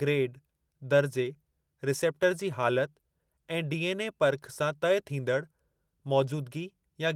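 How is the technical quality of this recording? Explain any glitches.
No glitches can be heard; the signal carries the mild, even texture of Opus voice compression, which fits roughly 24 kbps in hybrid mode, with the band reaching up to about 20.4 kHz.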